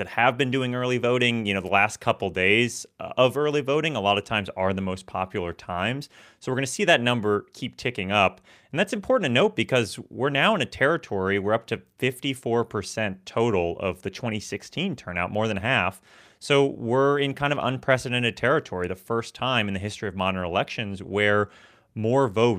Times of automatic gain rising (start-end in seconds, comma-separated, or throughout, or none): none